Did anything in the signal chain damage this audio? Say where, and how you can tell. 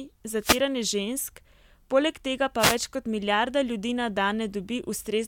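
Yes. The wireless link between the microphone and its receiver dropped out twice, causing a wireless microphone noise hit each time. Reflections briefly cancelled the FM carrier, so the receiver's own noise rose above the weakened signal as a swish of static, from 0.40 to 0.61 s and again from 2.59 to 2.76 s, between "poleg tega" and "kot milijarda". Each burst lasts about a fifth of a second.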